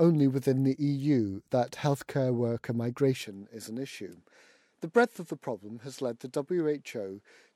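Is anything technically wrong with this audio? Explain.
Yes. From 3.23 s to the end, the speech turns duller without a gap. Nothing remains above 12.4 kHz. The level drops roughly 5 dB, and faint new noise appears. The input was likely switched to a poorer device, with a narrower band.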